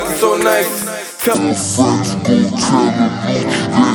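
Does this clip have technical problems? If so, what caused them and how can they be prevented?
Yes. A section at the wrong speed runs from 1.35 s to the end of the clip at 3.95 s. From that point the sound plays at about 0.56 times its original rate, so it drags and drops by roughly ten semitones, with pitch and tempo falling together in one step. The likely cause is that this stretch was played out or resampled against the wrong clock rate. To prevent it, confirm that every segment's sample rate matches the playback or project rate before joining or exporting.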